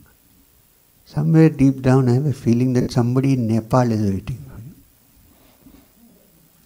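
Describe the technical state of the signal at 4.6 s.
A brief noisy smear replaces the sound from 4.53 to 4.57 s, from lost LE Audio frames. The LC3 decoder concealed the 40 ms gap, about four 10 ms frames, by repeating the last spectrum with random signs.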